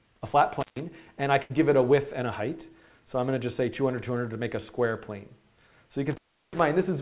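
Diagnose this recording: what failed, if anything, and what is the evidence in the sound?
Intermittent contact in the analogue wiring. The sound cuts out from 0.60 to 0.79 s, and again from 6.11 to 6.60 s. Crackle marks the edges of each gap. The line stays open for about 136 ms, then 350 ms. A loose plug or cable is breaking the circuit.

Burst of packet loss on the network, from 1.42 to 1.52 s. The receiver held the last sound for 77 ms and faded it down. Then 80 ms of audio is skipped and playback resumes further on. The call band stops at 4 kHz, which fits G.711 A-law.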